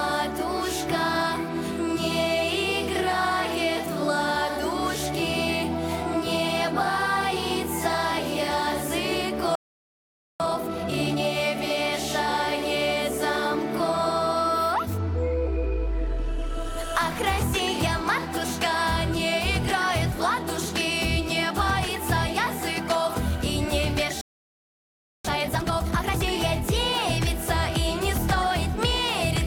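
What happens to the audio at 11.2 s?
At 11.2 s the audio is finishing a stretch of time-compressed catch-up that runs from 10.40 to 11.24 s. After a stall, the player clears its backlog by dropping tiny slices and cross-fading the joins. For those 0.84 s the sound plays at 2.0 times normal speed. Pitch stays where it should be. The effect is a rushed, squeezed passage, ending at 11.24 s.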